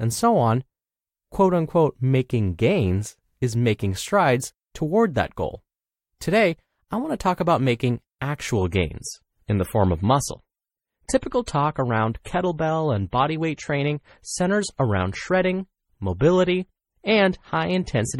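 From 8.57 s to the end, the speech turns suddenly swirly with no gap, an adaptive stream at a lower bitrate, consistent with MP3 dropping from 128 to 32 kbit/s.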